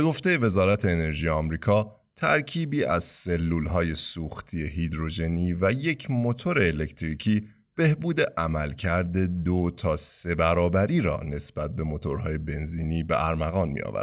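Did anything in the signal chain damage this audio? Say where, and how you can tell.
Yes. At 0.72 s the speech briefly smears, clearing by 0.76 s. That is short concealed packet loss on the network: 20 ms arrived too late, so the receiver extended the preceding sound across the gap, then blended back.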